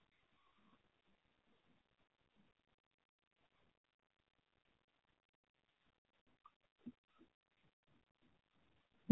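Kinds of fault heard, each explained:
AMR narrowband mobile codec: speech squeezed into a low-rate vocal-tract model, here around 7.4 kbps, giving plainly audible buzzy, synthetic timbre and nothing outside roughly 150 Hz to 3.5 kHz.
Lost AMR speech frames: from 5.36 to 5.44 s, about 80 ms of failed frames are concealed by repeating the last settings with fading gain, heard as a drawn-out, dipping warble.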